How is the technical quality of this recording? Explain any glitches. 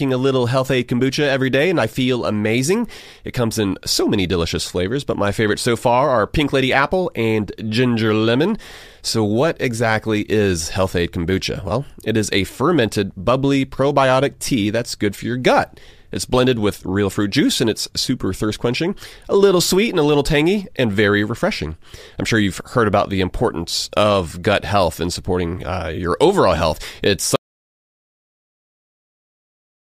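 One glitch stands out. From 27.36 s to the end, the speech cuts out abruptly in an audio dropout to silence lasting about 2.5 s, likely from lost input while silence kept being written. The waveform goes flat and the spectrogram turns blank, with no room tone.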